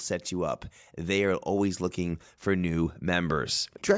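From 0.28 s to 3.56 s, automatic gain rising: the gain control judged the input too quiet and lifted it by about 5 dB, so speech and background swell together.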